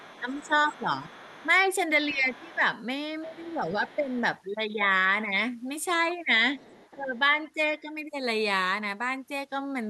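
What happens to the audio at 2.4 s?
The speech dips by roughly 15 dB from 2.11 to 2.62 s: speech suppressed in double talk, likely an echo canceller ducking when both sides spoke. Underneath, from 2.34 to 2.56 s, the other side's voice leaks through faintly, far below the speech, likely loudspeaker echo the canceller failed to remove.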